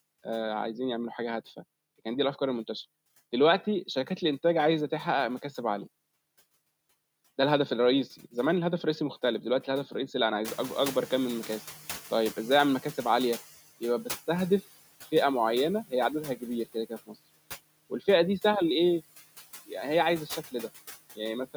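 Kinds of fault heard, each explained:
Noise suppressor artifacts: Throughout the clip, the suppressor estimates which frequency bands hold steady noise and lowers them frame by frame, by about 16 dB here. The background therefore dips in the gaps between phrases and comes back up underneath the talker, so the floor pumps with the speech.
Noise suppressor catching up: At around 10.5 s the room noise jumps by about 17 dB, ending up roughly 17 dB below the speech. The suppressor's noise estimate does not follow immediately. From 10.44 to 13.55 s the louder background passes through with less reduction than before, then sinks over those 3.1 seconds as the estimate adapts, reaching a cut of about 11 dB. The result is a noise bloom that gradually fades out.
Speech cut by the noise suppressor: Between 16.65 and 17.16 s the suppressor treats part of the speech as noise and turns it down with the background, at its deepest by about 18 dB. 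Only short fragments are affected, adding up to about a tenth of a second. Because of this, soft consonants or word endings in that span sound swallowed or faint rather than cleanly articulated, since low-level speech energy there falls below the suppressor's noise threshold.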